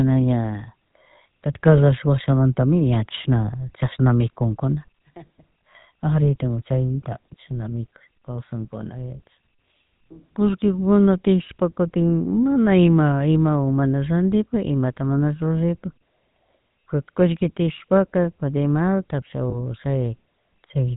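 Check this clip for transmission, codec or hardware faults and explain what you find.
Two faults are audible: GSM full-rate coding across the whole clip, and one lost GSM frame near the end.

GSM full-rate codec, throughout: The coder models the vocal tract and excites it with sparse, regularly spaced pulses, which fits the 13 kbps full-rate scheme. Nothing above 4 kHz survives. The damage is plainly audible as a buzzy, gravelly roughness on the speech.

Lost GSM frames, at 19.5 s: A dropout of about 20 ms, consistent with a single lost frame, was concealed by repeating the previous good frame's parameters. The result is a brief rough, metallic ring in place of the missing audio.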